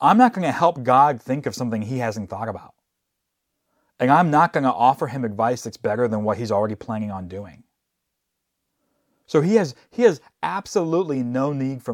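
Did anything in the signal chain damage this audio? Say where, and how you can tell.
No, no stage of the signal chain has left any audible damage on this speech recording.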